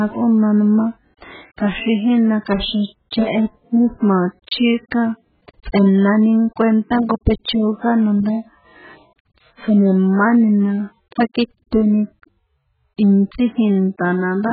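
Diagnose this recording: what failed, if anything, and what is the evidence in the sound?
AAC compression runs through the whole speech recording, likely introduced at the codec stage. Nothing sounds above about 4.7 kHz, so the speech is dull and muffled, with heavy smearing and a watery, warbling texture. The encoder quantised each frame's frequency lines so coarsely that it dropped the upper band and left gaps in what remained. Damage this severe points to a very low bitrate, around 8 kbps with AAC-LC.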